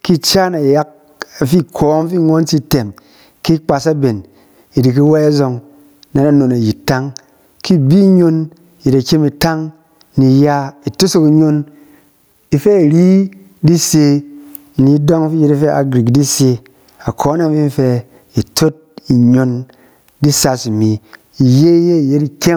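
Gain pumping runs through the whole clip. The gain swings by around 20 dB. Loud and soft parts sit close together, and the speech sounds squashed. The likely cause is excessive input gain clamped by a fast limiter.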